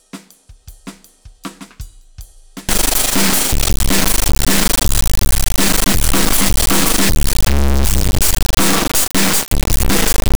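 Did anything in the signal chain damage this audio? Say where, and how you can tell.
Yes, at sample-format conversion: from 2.69 s the music becomes a blaring, buzzing square wave, which fits an integer read as float, 32-bit integer samples misread as 32-bit float.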